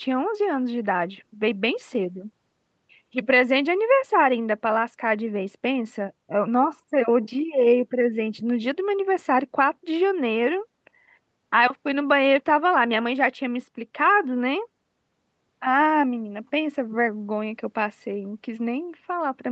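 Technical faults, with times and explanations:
Nothing stood out on listening to this speech recording, which carries the ordinary sound of a call microphone's processing.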